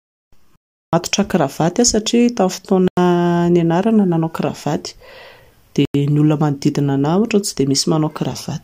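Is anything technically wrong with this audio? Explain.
Yes. The speech drops out three times: a long hole of about 0.37 s from 0.56 to 0.93 s, then two shorter gaps of about 0.09 s at 2.88 to 2.97 s and 5.85 to 5.94 s. These are blocks of digital silence. Whole chunks of output were left as zeros, most likely because the buffer wasn't filled in time. Their lengths fit blocks of 16384 and 4096 samples. The sound cuts to and from zero abruptly, with no fade.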